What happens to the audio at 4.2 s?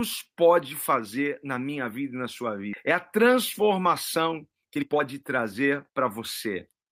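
A jitter buffer speed-up runs from 3.17 s to the end. Short pitch-period chunks, about 0.4 s in total, are cut so the speech plays at 112% speed, hurried but unchanged in pitch, unlike resampling.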